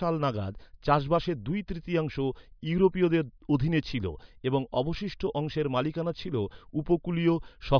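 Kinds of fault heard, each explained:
No technical fault can be heard anywhere in the speech signal.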